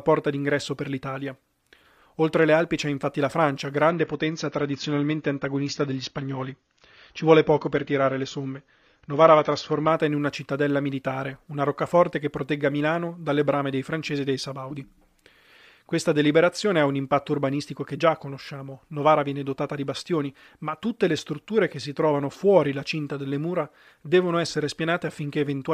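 From 3.90 s to 9.90 s the adaptive stream switches to a lower bitrate. The speech suddenly loses all content above 7 kHz and turns swirly, pointing to AAC at about 24 kbit/s. A spectrogram shows an abrupt flat ceiling, and the waveform has no gap.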